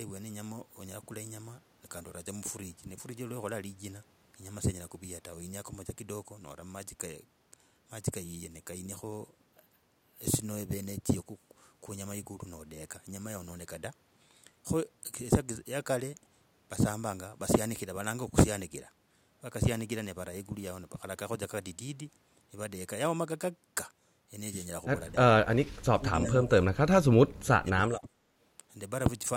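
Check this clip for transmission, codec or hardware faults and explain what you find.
One fault appears, twice: speech suppressed in double talk. The likely cause is an echo canceller that could not tell the talker apart from loudspeaker echo while both sides spoke, so it attenuated everything. At 25.12 to 25.28 s the speech dips slightly, and from 25.72 to 28.2 s it is cut deeply, by about 35 dB, with roughly two seconds affected.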